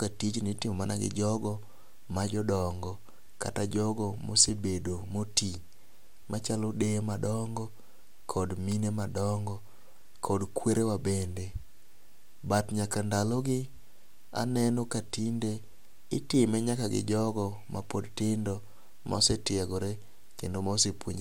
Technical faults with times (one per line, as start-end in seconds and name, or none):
0.00-21.21 generation loss